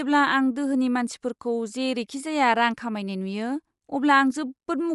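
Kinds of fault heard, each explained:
Bluetooth LC3 compression: The speech carries plainly audible codec damage throughout, likely from LC3, the Bluetooth LE Audio transform codec, coding sound in 10 ms frames. Nothing remains above 11.6 kHz. The degree of damage fits a bitrate around 48 kbps.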